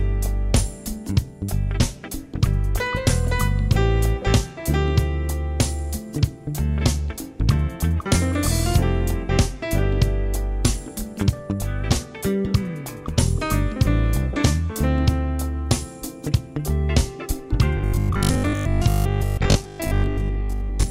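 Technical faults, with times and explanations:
17.77 to 20.89 s: robotic sound from repeated short buffers. The sound hardens into a rigid, metallic buzz at 50 Hz. Most of this stretch is repeated material, not new audio. This is likely one 20 ms buffer replayed over and over while fresh audio arrives too seldom.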